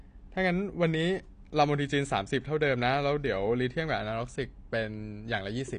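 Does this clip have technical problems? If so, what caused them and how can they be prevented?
Yes, throughout, low-bitrate AAC compression likely starved the frames of bits, consistent with about 32 kbps, so nothing survives above 9.8 kHz and the speech sounds dull and smeared. Encoding at a higher bitrate would prevent it.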